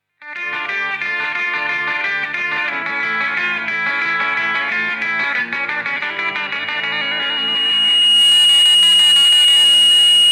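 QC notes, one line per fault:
5.94–10.31 s, loudspeaker feedback squeal: a pure tone near 2.9 kHz rises out of the sound, swelling over roughly two seconds until it sits about 10 dB above everything else, and it is still ringing when the clip ends. A microphone is hearing the loudspeaker it drives, and at 2.9 kHz the round-trip gain has passed unity, so that one frequency keeps feeding itself and climbing until the level is capped.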